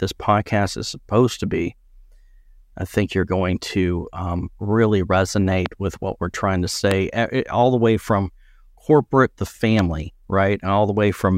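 Three loud pops land at 5.66 s, just before "with what we're trying", at 6.91 s, between "what we're trying to" and "all the way from", and at 9.79 s, after "way from corporate the". Each is a single sharp thump around 15 dB above the speech, likely a voltage pulse from a switch or static. Unlike a dropout, the speech continues uninterrupted beneath each one.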